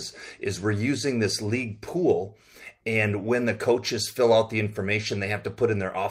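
No technical faults can be heard anywhere in the audio. Nothing in the sound stands out as a problem.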